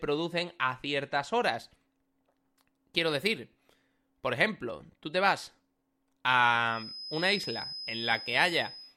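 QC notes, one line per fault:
6.65 s to end, feedback whistle: likely a speaker-to-mic loop held just at the edge of feedback, sustaining a thin, wavering 5.1 kHz tone around 15 dB below the speech.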